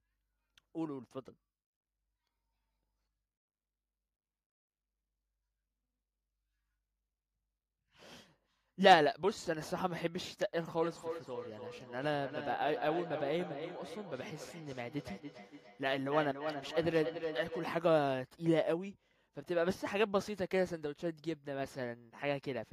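From 10.82 s to 17.8 s the speech is followed by a feedback echo between two devices. A second device in the same room plays back what the first microphone sent, and that microphone picks it up again. Its echo canceller only removes its own playback, so this copy gets through. Each word returns roughly a third of a second later, at a fixed interval, peaking about 9 dB below the speech. That fixed delay sets it apart from room reverberation, which smears sound without distinct, evenly spaced repeats.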